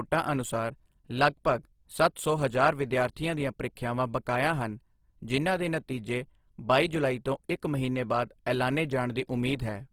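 Throughout, the speech sounds grainy, rough and plainly noisy, with full bandwidth kept, which points to Opus compression, likely at a low bitrate near 16 kbps.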